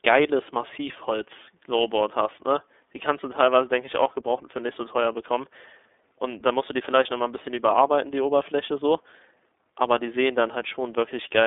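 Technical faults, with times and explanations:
Throughout, iLBC codec: the speech has gone through a narrowband VoIP codec, and the damage is plainly audible. The band runs from about 250 Hz to 3.6 kHz, with nothing above 3.8 kHz, so everything sounds boxy and phone-like. Each frame's excitation is coded independently, which leaves a rough, slightly synthetic grain on the voice. The texture fits 30 ms frames at a bitrate around 13.33 kbps.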